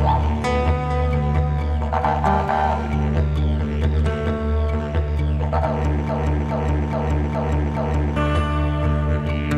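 The playback or streaming chain likely stalled at about 6.09 s and kept resending the last fragment it held, producing a broken-record loop. A piece of audio about 0.42 s long repeats exactly, back to back, five times, until 8.16 s. For those two seconds the sound stutters in a rigid, mechanical cycle, and whatever should have played in that span is missing, so the audio resumes after a gap in its continuity.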